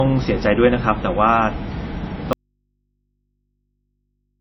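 Throughout, the speech has nothing above 5.8 kHz and carries coarse low-bitrate MP3 artefacts: low-bitrate audio saved at a high bitrate, which fits a 24 kbit/s encode likely re-saved at 165 kbit/s.

At 2.33 s the speech cuts off abruptly and never returns. Only faint mains hum remains, roughly 55 dB below the speech level. This is an audio dropout to a faint residue, likely the signal being lost while the input stayed live.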